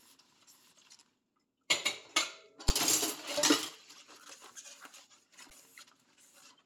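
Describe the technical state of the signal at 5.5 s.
An underrun with held sample occurs at 5.5 s: the output buffer ran dry and the converter froze on its last value for 10 ms, so the waveform flattens and the sound briefly stops. About 10 ms of live audio was skipped before it resumes.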